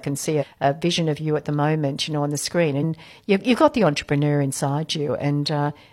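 Compressed frames get skipped twice in this speech: around 0.38 to 0.44 s, just before "a vision of you", roughly a fifth of a second jumps away, and near 2.79 to 2.84 s, after "know on the screen", about 0.7 s vanishes. Whole 46.4 ms frames never get decoded, so the speech jumps ahead at each join.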